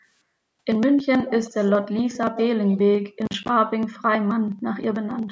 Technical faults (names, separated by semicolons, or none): echo leak; processor overload crackle